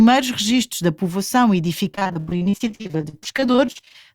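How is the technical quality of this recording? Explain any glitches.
The recording is marred by repeated packet loss (robotic sound) from 1.91 to 3.96 s. Audio data kept going missing in many short holes, the longest about 82 ms. Each hole was patched by extending the previous sound, covering about 44% of that stretch. The result is choppy.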